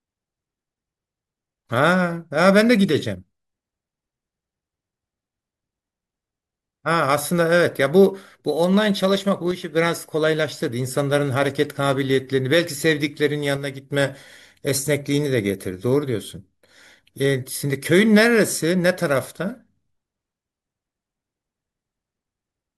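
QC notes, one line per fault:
9.51–9.75 s and 13.57–13.91 s: one channel drops out. The level steps down abruptly by about 6 dB for 0.23 s and then 0.34 s, snapping back just as suddenly each time. This is likely one stereo channel going silent. Once the pair is folded to mono, sound common to both sides loses half its contribution, giving the sharp 6 dB dip, and anything carried only on the missing side disappears for those spans.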